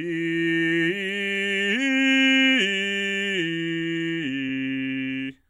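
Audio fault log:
4.46–4.49 s, damaged data in a compressed stream: a brief glitch cuts through the music for about 36 ms. Corrupted bytes made the decoder misread those frames and lose sync until it found the next valid frame header, producing garbled output.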